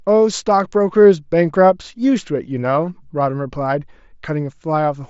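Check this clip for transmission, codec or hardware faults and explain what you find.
One transmission fault appears, a concealed Bluetooth headset packet loss at 1.04 s. The receiver patched a gap of about 7.5 ms, which fits a single lost frame, by repeating a closely matching stretch of the preceding waveform. Unlike a plain dropout, there's no silent gap or click, only a barely noticeable smear. The underlying mSBC wideband headset link carries the audio with light grainy coding texture.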